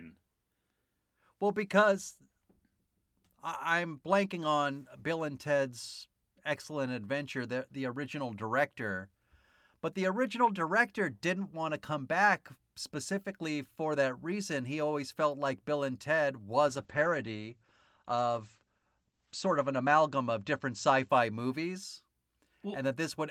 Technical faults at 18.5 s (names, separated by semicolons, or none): call bitrate drop